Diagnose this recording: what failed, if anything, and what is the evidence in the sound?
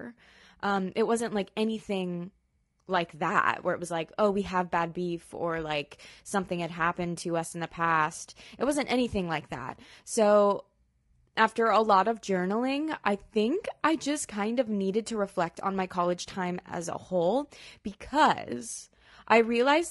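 The failure sits at the codec stage and runs through the whole speech clip: the voice is plainly rough and grainy from start to finish, which points to low-delay AAC compression, likely AAC-ELD at a bitrate near 32 kbps. Its short frames resolve pitch harmonics poorly, so on a spectrogram the harmonic lines look smeared, with noise filling the gaps between them and a thinned or patchy, synthetic-looking upper band.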